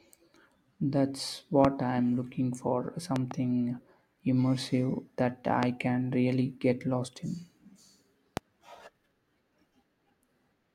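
Loud pops occur at 1.65–1.67 s, 3.16–3.33 s (a double pop) and 5.63–5.65 s and 8.37–8.39 s. Each is a sharp thump about 15–20 dB above the speech, likely from an electrical voltage spike. Unlike a dropout, the speech carries on underneath each pop.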